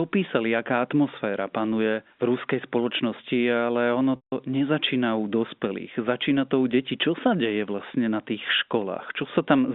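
From 4.16 to 4.32 s, a buzzy held pitch fades to silence and then cross-fades back. This is packet loss with pitch repetition concealing a 160 ms gap.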